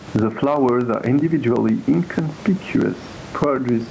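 Throughout the recording the level pumps, which is gain pumping: the background rises in each pause and sinks under every louder stretch of speech, swinging by roughly 15 dB. The likely cause is a fast limiter or compressor clamping an input gain set far too high. On a waveform the envelope looks flattened, and a spectrogram shows the low-level room noise brightening between syllables.

From 0.06 s to the end, periodic USB or driver dropouts recur every 0.125 s, eight per second and around thirty in all. Each one cuts about 1 ms of audio to silence, heard as a regular tick whenever speech is present. They appear as evenly spaced notches in the waveform and thin vertical gaps across the spectrogram.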